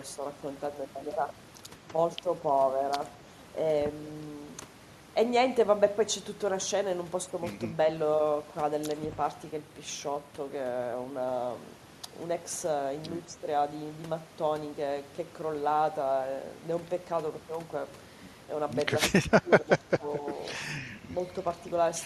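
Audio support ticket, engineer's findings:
Speech suppressed in double talk, 19.11 to 20.23 s. Level dips in patches, deepest cut around 15 dB, roughly half a second affected in total. Likely cause: echo canceller misreading double talk. Near-end speech treated as loudspeaker echo while far end active. Suppressor ducks both. Check double-talk detector thresholds and suppression depth.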